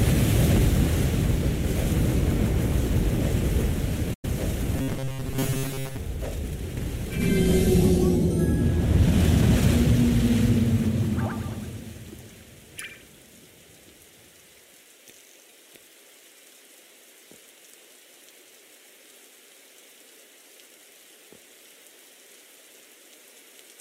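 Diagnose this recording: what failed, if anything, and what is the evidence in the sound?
The first failure is in broadcast reception: a digital broadcast dropout at 4.13 to 4.25 s. The sound fades out over about 8 ms and goes silent for roughly 96 ms before the programme resumes. A short mute like this is what a receiver does when frames fail their checksum or the signal drops. The length points to about three frames of roughly 32 ms each being discarded. That audio is gone, not delayed.

From 4.76 to 5.98 s the sound becomes a rigid, metallic buzz fixed at 134 Hz that still loosely tracks the underlying audio. This is robotic sound from repeated short buffers, and the stage is the driver or buffer. The likely cause is a starved playback buffer that repeatedly replays its last fragment of about 7.5 ms, one period of 134 Hz, while fresh audio is skipped. Most of the material in that stretch appears to be repeats.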